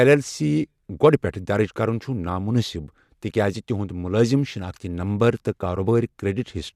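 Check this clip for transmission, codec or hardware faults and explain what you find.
No transmission, codec or hardware faults can be heard here.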